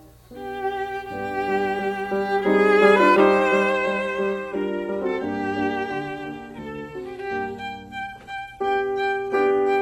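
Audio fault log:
3.72–9.82 s, adaptive stream at a lower bitrate: the connection slowed, so the player switched mid-stream to a much lower-rate version, and the sound fits a move from full-band AAC at around 96 kbit/s to HE-AAC at around 16 kbit/s. The change in the music is abrupt with no gap. From that point to the end, nothing sounds above 12.3 kHz, so the top end turns dull, and compression artefacts thicken because far fewer bits are left to describe the sound.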